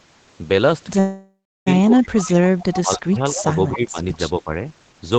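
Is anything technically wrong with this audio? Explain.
Yes. There are three kinds of fault.

From 0.99 to 1.68 s there is a call audio freeze, likely caused by delayed packets draining the jitter buffer. The last sound trails off, including about a third of a second of silence, then the audio resumes where it stopped, with nothing lost.

At 1.88 to 2.35 s, 2.74 to 3.97 s and 4.40 to 4.51 s, speech is suppressed in double talk. The echo canceller likely mistook the talker for loudspeaker echo while both sides spoke. The voice dips by as much as about 25 dB, about 20 dB and about 10 dB in turn.

At 2.19 to 2.80 s, 3.12 to 3.78 s and 4.12 to 4.18 s there is echo leak. Residual loudspeaker sound likely slipped past the echo canceller and returned as a copy delayed by 270 ms. It sits about 15 dB below the speech, and about 30 dB below in the last, brief instance.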